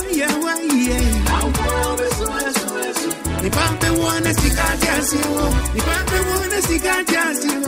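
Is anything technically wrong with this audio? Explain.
Yes. From 3.29 s to 5.61 s there is overlap-add ripple. The sound was split into windowed frames and rejoined with an overlap whose windows do not add up to a constant gain, so the level swings up and down once per frame. The swing is about 11 dB deep, repeating at around 200 Hz. That rate sits in the audible range, so it comes across as a metallic buzz with extra tones around each note laid over the sound for that stretch.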